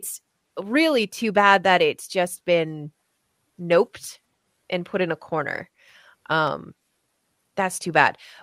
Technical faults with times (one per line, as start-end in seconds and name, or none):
0.16-6.47 clock drift buffer slips